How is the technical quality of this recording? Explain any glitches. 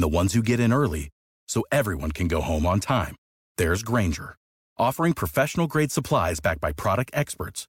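No technical glitches can be heard in this recording; the speech signal stays steady and intact throughout.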